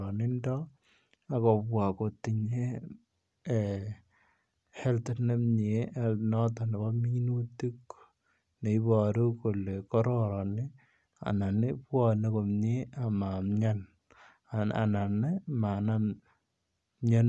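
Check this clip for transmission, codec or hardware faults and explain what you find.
No faults found.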